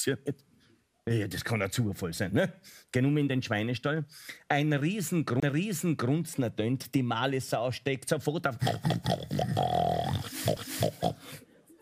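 The audio has two CD skips. At 5.40 to 5.43 s there is a short muted gap of about 30 ms, and at 10.56 s a brief tick of a couple of milliseconds, each followed by an abrupt jump in the material. The laser was knocked or hit a flaw, so the player lost its track, muted briefly and resumed on another turn of the disc's spiral, either forward or back.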